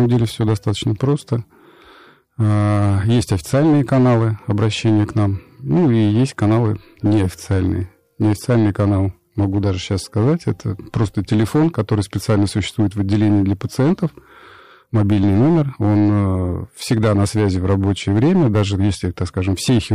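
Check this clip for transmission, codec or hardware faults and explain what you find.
One fault is present: the speech is clipped throughout.

Hard clipping runs the whole clip. The level was pushed about 6 dB beyond what the stage could pass, so around 7 percent of samples have their peaks sheared flat, adding high harmonics heard as distortion on the loud peaks.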